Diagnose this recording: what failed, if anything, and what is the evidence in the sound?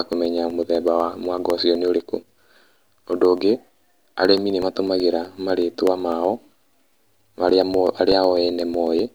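Driver or USB stage. From 0.13 to 8.99 s there's a small tick every 0.125 s, each about a millisecond of the speech blanked to silence. Classic periodic USB or driver dropouts: something blocks the bus on a fixed schedule, so the ticks only show under signal.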